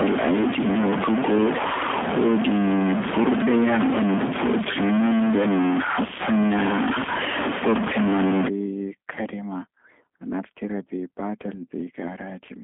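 From the start to 8.48 s, a likely stuck bit in the sample data, one bit frozen at a fixed value by a faulty line or converter, pushes roughly half of the samples off by that bit's weight in a waveform-dependent pattern. The speech takes on a grainy or buzzy distortion, depending on which bit is stuck, and because small values near silence are flipped as their sign changes, the pauses fill with noise rather than falling quiet.

Across the whole clip, the speech has passed through a G.729 codec, here the G.729A variant at 8 kbit/s. It reconstructs speech from a vocal tract filter, a pitch predictor and a few pulses per short frame rather than from the waveform itself. The line band runs from about 150 Hz to 3.5 kHz, so the sound is narrow and telephone-like. The codec damage is plainly audible as a rough, slightly synthetic texture on the speech.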